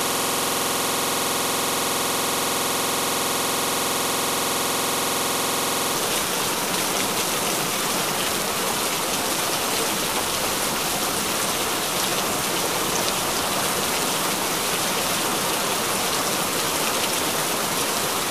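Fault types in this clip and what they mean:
System hang loop: the computer or its audio driver stalled while the playback hardware kept replaying the last filled ring buffer, so one 46.44 ms slice of sound repeats exactly, well over a hundred times. At that length the repetition fuses into a rough, steady buzz at about 21.5 Hz, which fits a 2048-sample buffer. The loop is already running when the clip begins and lasts until 5.96 s.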